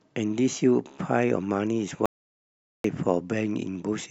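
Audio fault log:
2.06 to 2.84 s, audio dropout to silence: the speech cuts off abruptly mid-flow and resumes just as suddenly about 0.79 s later. The gap between is dead silence, with no room tone or background hiss. The likely cause is a momentary loss of the input signal, such as a dropped connection or a brief mute, while recording carried on writing silence. Whatever was spoken during that stretch is lost entirely.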